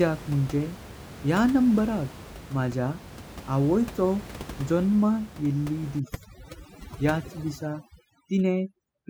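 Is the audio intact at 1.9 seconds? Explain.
Yes, the audio is intact at 1.9 seconds.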